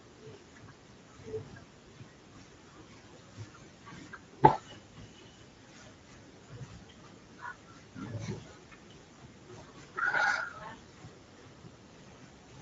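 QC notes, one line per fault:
Throughout, Speex codec: plainly audible coding damage, speech sounds hoarse and noisy, consistent with roughly 17 kbps Speex starving the excitation of bits.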